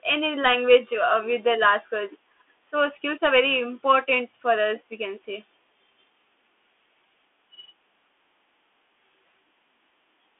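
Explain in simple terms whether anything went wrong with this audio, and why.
Bluetooth CVSD headset codec, throughout: the speech passed through a headset link that sends only tiny up-or-down steps, losing everything above 3.8 kHz and audibly roughening it.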